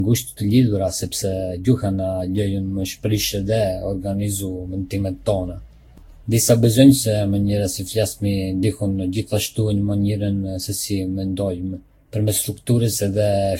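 A speech recording with a swirly, hollow, smeared character from start to finish, and the likely cause is generation loss: the audio seems to have been through a lossy codec around ten times, each pass re-quantising on a shifted frame grid so the damage compounds. The sound fits a Vorbis chain near 60 kbit/s, yet it is blurrier than that rate alone would give, with softened consonant attacks. On a spectrogram there is a hard ceiling at 16.6 kHz, nothing above it, and the upper bands look patchy, with scattered holes and smeared, flickering energy instead of clean harmonic lines. Near the end, from 12.43 to 12.47 s, chunks play out of order. A 10 ms chunk arrives three chunks late and plays after the material that should follow it, so nothing is missing but the sequence is scrambled. It is heard as a brief jumbled stutter. On the waveform, three abrupt discontinuities appear inside that 40 ms span where the misplaced segment is spliced in, and the spectrogram shows them as thin vertical broadband lines.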